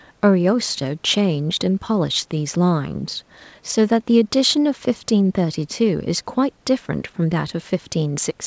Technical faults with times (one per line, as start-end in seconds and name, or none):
none